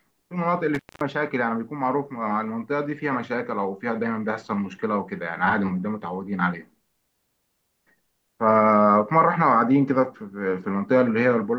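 Intermittent contact breaks up this speech clip from 0.75 to 1.01 s. A loose cable or plug connection momentarily lifts, so the signal path opens for about 217 ms and the speech drops out almost completely. A faint hiss remains across the gap. The unstable metal-to-metal contact as the joint separates and closes again produces crackles at both edges of the dropout, at around 0.75 s and again near 1.01 s.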